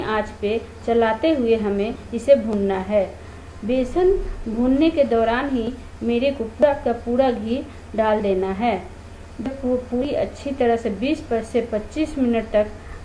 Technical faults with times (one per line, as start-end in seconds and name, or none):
none